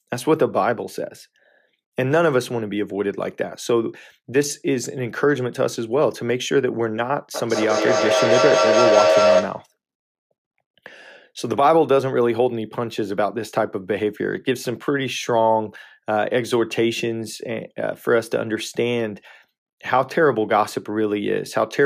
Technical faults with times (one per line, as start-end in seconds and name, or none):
7.34-9.74 feedback howl